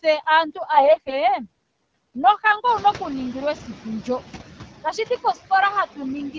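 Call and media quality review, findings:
Noise suppressor artifacts, whole clip. Residual noise pumps: it drops between phrases and swells under speech. The suppressor gates steady-noise bands frame by frame, cutting about 12 dB.

AMR bit errors, 0.74 to 1.24 s. Speech turns hoarse, scratchy and gargly, while pitch and level hold roughly steady. The likely cause is flipped low-protection bits in AMR-WB frames that still passed the checksum. 19 frames are hit, at roughly 15% bit errors.

Noise suppressor catching up, 2.65 to 3.87 s. Room noise jumps by about 14 dB around 2.5 s. At first it leaks through with only about 7 dB of reduction, then sinks over roughly 1.2 s as the noise estimate adapts to the new level.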